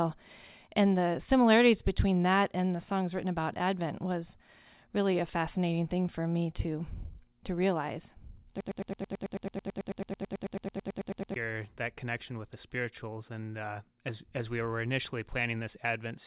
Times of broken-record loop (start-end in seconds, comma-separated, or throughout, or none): 8.61-11.36